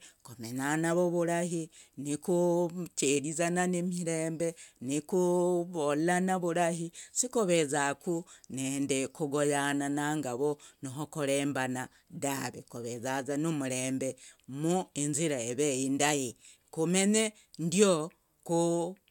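No technical faults are audible anywhere in this recording.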